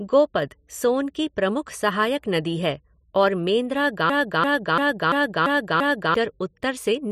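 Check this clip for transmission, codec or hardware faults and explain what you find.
There is one fault, a system hang loop. From 4.10 s to 6.14 s, just after "नदी है और मेंद्रा", the speech loops: one 341 ms fragment repeats exactly six times, about 2.93 times per second. The system froze while the audio hardware kept replaying the same ring buffer. The loop length fits a 16384-sample buffer, and about two seconds of the real speech are lost under the repeats.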